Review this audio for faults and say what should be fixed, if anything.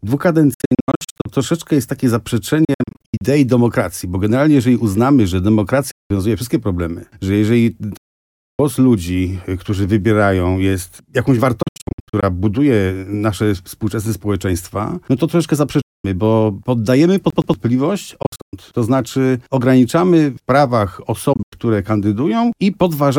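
Silent gaps occur at 0.54–1.26, 2.65–3.22, 5.91–6.11, 7.97–8.59, 11.62–12.23, 15.81–16.05, 18.22–18.53 and 21.33–21.53 s. These are likely Bluetooth dropouts, where late packets were discarded and playback resumed further on.

At 17.30–17.54 s, the CD is stuck on one turn. A 116 ms slice repeats twice as the laser jumps back.

Fix both by re-ripping the audio from an undamaged disc and monitoring over a wired connection instead of Bluetooth.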